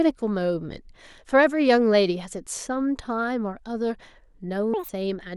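A speech clip in which, from 4.74 to 4.89 s, the sound abruptly lurches into a chipmunk-like burst: for roughly 0.15 s it runs at 2.0 times normal speed and jumps up an octave. This is audio read two samples at a time (double speed). The reader treats each pair of samples as a single frame, as if the stream were stereo or used samples twice as wide, so time is compressed by half and content above a quarter of the sample rate folds back.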